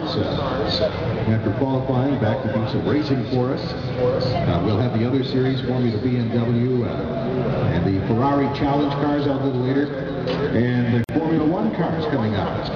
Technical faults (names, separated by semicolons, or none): gap at a join of encoded pieces